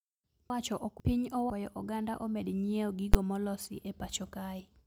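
Between 0.5 and 1.5 s the speech jumbles briefly. These are chunks out of order: a 500 ms chunk arrived one chunk late and played after the chunk that should have followed it. No audio is missing, but the sequence is swapped, leaving three hard joins across that second. Each join breaks the waveform abruptly, so the passage sounds scrambled.

At 3.14 s a single loud bang is heard. This is invalid numbers at full scale: a processing calculation produced infinite or invalid values, and these were forced to one extreme sample value for one block of about 10.7 ms, which fits a 512-sample block. The output sits flat at one extreme value, far from zero, for that short stretch, so the pops at its start and end merge into one sharp, very loud crack.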